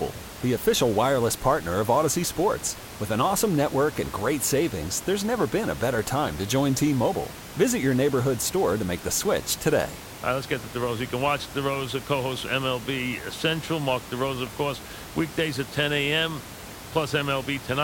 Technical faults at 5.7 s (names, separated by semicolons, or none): none